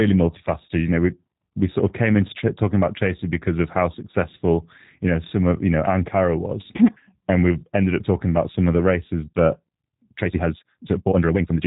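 Speech, and it's been through a G.729 codec for its whole length. Everything above about 3.8 kHz is gone, so it has that boxed-in telephone sound, and there's a plainly audible rough, slightly synthetic edge where the codec rebuilds each short frame from a vocal tract model and a handful of pulses instead of the real waveform. That fits a low-rate link of around 8 kbit/s, probably the G.729A variant. Then from 10.15 s to the end, the pace suddenly jumps to nearly double speed, about 1.95 times, while the pitch stays where it was. It comes across as rushed. That points to a time-stretched section, most likely software squeezing the tail end to fit a length, keeping the pitch by discarding short chunks rather than resampling.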